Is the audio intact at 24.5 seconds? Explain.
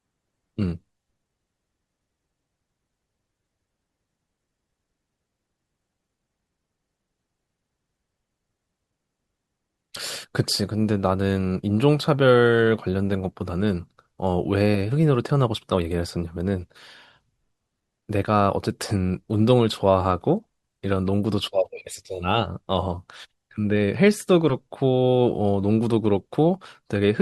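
No. Between 24.49 and 24.52 s the speech suffers compressed frames skipped: a couple of frames never reach the output, so the audio jumps ahead by roughly 20 ms, which fits a 10 ms frame size. The speech simply leaps across the missing stretch rather than pausing. That sets it apart from a dropout, which leaves a silent gap.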